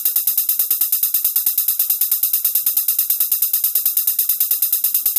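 Nothing stood out as a technical problem on listening to the audio.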